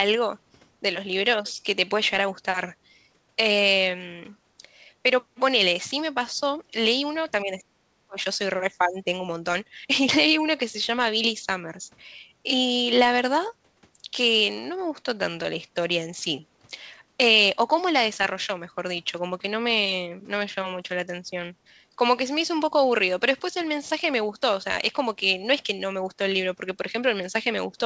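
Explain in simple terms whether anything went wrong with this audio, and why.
Twice the talker's voice gets turned down. From 7.43 to 8.18 s it nearly vanishes, and from 8.84 to 9.07 s it dips more gently. This is speech suppressed in double talk. Both sides likely spoke at once, and the echo canceller muted the voice too.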